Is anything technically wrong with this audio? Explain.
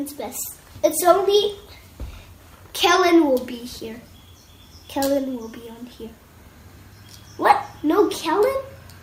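No, nothing technically wrong can be heard here.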